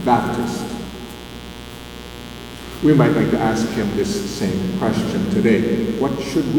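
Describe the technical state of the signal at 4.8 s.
Mains buzz is present at 4.8 s, as it is across the whole clip. Switching spikes at twice the 60 Hz line rate leak in, spreading harmonics up into the kilohertz range, and sit roughly 15 dB under the signal as a steady, raspy buzz.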